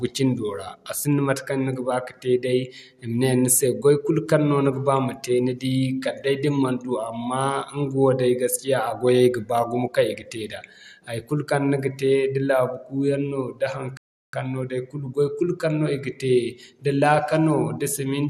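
At 13.97 s, just after "yaŋ no da", the speech halts in a rebuffering stall: the player has exhausted its downloaded audio and waits for more data before continuing. The result is about 0.36 s of silence, ending at 14.33 s, after which playback picks up exactly where it stopped, with "no day kulu goy". No speech is skipped or repeated. The stall only inserts dead time, so the pause sounds abrupt and unnatural rather than clipped.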